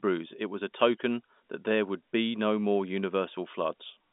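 No technical faults are audible.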